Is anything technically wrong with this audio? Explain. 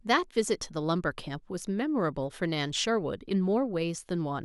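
No, nothing technically wrong can be heard in this speech recording. There is no fault to point to anywhere in it.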